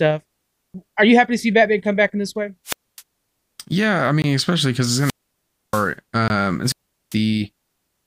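Speech that is broken three times by a rise of hiss followed by a hole of near silence, at 2.65–3.02 s, 4.88–5.94 s and 6.63–7.17 s, with the muted stretches lasting about 0.26 s, 0.63 s and 0.40 s. This is wireless microphone squelch dropout: the analogue FM radio signal fades, the receiver's squelch shuts the output, and the voice comes back once the signal recovers. Separately, two abrupt 20 ms holes at 4.22–4.24 s and 6.28–6.30 s cut straight to dead silence. These are blocks of digital silence, where samples were replaced by zeros, which points to the output buffer not being filled in time.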